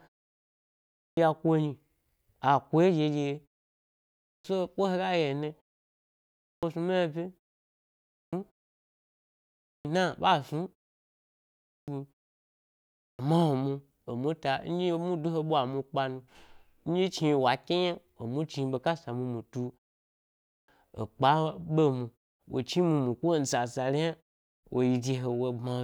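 At 0.52, 3.87 (before "so ko"), 6.01, 7.71, 9.19, 11.22, 12.54 and 20.1 s, each return of speech after a pause of 0.4 to 0.76 s has a clipped start. The output device sleeps in the silence and takes roughly 0.6 s to wake, so the first 0.57 to 0.66 s of sound is lost and speech begins abruptly, without its first sounds. On a waveform or spectrogram, silence gives way to speech energy with no onset ramp.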